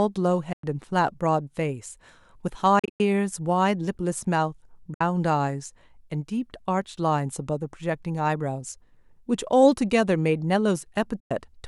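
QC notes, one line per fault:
0.53–0.64 s: Bluetooth dropout, likely cause. The sound cuts to silence for about 0.1 s, then resumes further on, as if it had kept playing, because a burst of audio packets missed the headphones' deadline and was discarded.
2.79–3.00 s: Bluetooth dropout, short holes scattered over about 0.2 s, totalling about 0.16 s of missing sound. The longest gap is about 0.1 s. Intermittent packet loss likely chops the audio into fragments rather than leaving one clean gap.
4.94–5.01 s: Bluetooth dropout, a brief silence of about 60 ms. The sound picks up later rather than where it stopped, which points to a handful of late packets being skipped over.
11.20–11.31 s: Bluetooth dropout, another silent hole of about 0.1 s near the end. Its cut-out and time-skipped return match the first dropout, consistent with the same kind of wireless packet loss.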